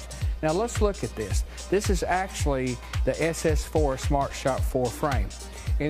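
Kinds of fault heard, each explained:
Mains hum: a ground loop or a nearby transformer is coupling the 60 Hz power line into the signal path, laying a steady low tone under the sound for the whole clip, sitting roughly 15 dB below the wanted audio.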